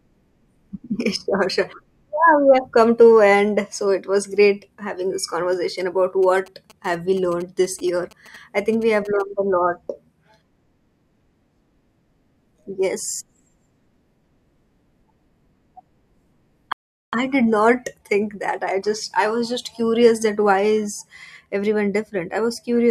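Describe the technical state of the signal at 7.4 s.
At 7.4 s the speech carries GSM signalling bursts, running from 6.23 to 9.22 s: a nearby 2G phone's radio pulses are rectified by the audio circuitry into a galloping dit-dit-dit of short 217 Hz buzzes, roughly 25 dB below the speech. A spectrogram shows clustered vertical stripes with harmonic lines at 217 Hz spacing.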